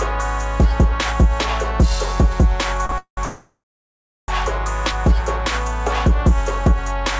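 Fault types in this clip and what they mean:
Short stall from a late packet: At 2.86 s a packet arrived late, so the receiver stretched the music for about 32 ms to cover the wait, then picked up exactly where it left off. Nothing is lost, but the sound briefly hangs.
Call audio freeze: Twice the music tails off into silence, from 2.98 to 3.19 s with about 0.11 s of quiet, and from 3.25 to 4.30 s with about 0.7 s of quiet. It then resumes where it stopped, nothing skipped, likely from packets held up in transit.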